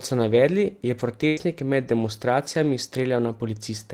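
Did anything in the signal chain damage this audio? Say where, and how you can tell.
Yes, the network stage damaged it. There was a burst of packet loss from 1.27 to 1.40 s, between "so navedli je" and "med demonstracijami". A run of packets never arrived in time, so the receiver stretched the last sound it had for about 95 ms and faded it out. You hear that as a held, decaying tone or hiss. Speech then picks up about 100 ms further on, and that stretch of audio is simply gone.

Inside that same stretch, at 1.37 to 1.39 s, one lost packet was rebuilt from error correction. The packet that followed it carried a low-bitrate backup copy, which is Opus in-band forward error correction. The decoder played that copy instead of leaving a hole. The 20 ms span fits a single standard Opus frame. It sounds rougher and noisier than the audio around it, because the copy carries far less detail than the original frame.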